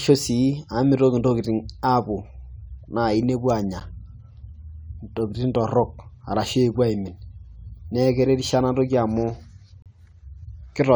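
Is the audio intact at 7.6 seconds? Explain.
Yes, the speech at 7.6 seconds plays through intact, with no fault at that moment.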